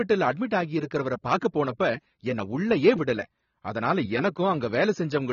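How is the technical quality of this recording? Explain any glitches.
Technical quality is poor, with plainly audible AAC compression throughout. The speech sounds dull, with warbling and fizz on sibilants, likely from AAC-LC coarsely quantising frequency bands at a bitrate near 24 kbps. A spectrogram shows a hard ceiling at 7 kHz.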